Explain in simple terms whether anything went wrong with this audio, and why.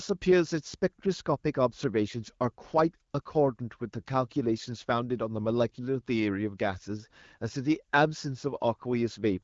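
Yes, something did go wrong, though it's tiny. Right around 3.11 s, and again from 3.21 to 3.25 s, the phone decided the talker had gone quiet and stopped sending speech. What you hear in those gaps is AMR comfort noise, a smooth, made-up hiss the receiving end generates to stand in for the real background. The swaps are very short, so they come across as brief flickers in the background texture, all of it carried over an HD Voice (AMR-WB) call.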